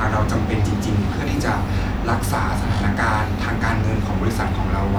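No technical faults are audible anywhere in this speech recording.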